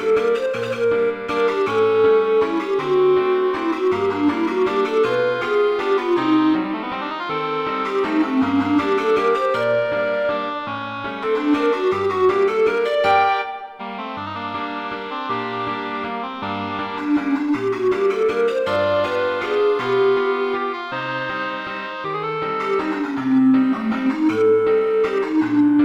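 At 11.23 to 11.26 s the audio jumps abruptly forward, with a short blip where the two sides of the gap meet. The likely cause is a stream segment skipped: one chunk of a segmented stream failed to arrive and the player continued with the next, so a stretch of the programme is missing. On a waveform the envelope changes suddenly at the splice. A spectrogram shows a thin vertical broadband line there, with the spectral pattern changing abruptly across it.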